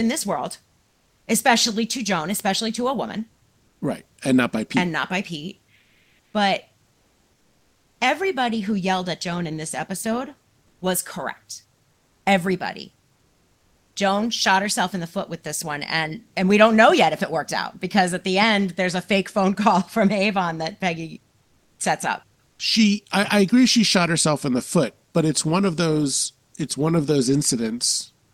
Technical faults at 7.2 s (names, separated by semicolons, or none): comfort noise in place of the background